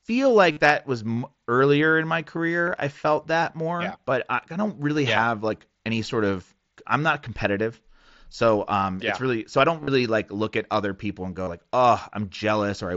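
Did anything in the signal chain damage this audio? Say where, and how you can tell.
Yes. The Bluetooth link between headset and phone dropped packets, and the gaps were concealed: concealed Bluetooth headset packet loss. At 0.51 to 0.57 s, just before "that was", about 52 ms turns into a buzzy, repeated tone at full level. A brief patch at 2.66 s sits between "earlier in my" and "I felt that more". At 9.81 to 9.88 s the losses are scattered, the longest run about 38 ms. At 11.44 to 11.48 s, after "other people and go", about 38 ms is lost. Each gap was filled by looping the last stretch of waveform, with a small warble as real sound returns.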